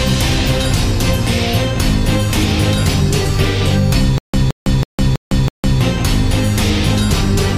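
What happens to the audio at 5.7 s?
A stutter with silent gaps runs from 4.18 to 5.81 s, so 5.7 s falls inside it. The same 169 ms burst repeats five times, each followed by about 157 ms of dead silence, likely a stalled stream replaying its last fragment while the intended audio is lost.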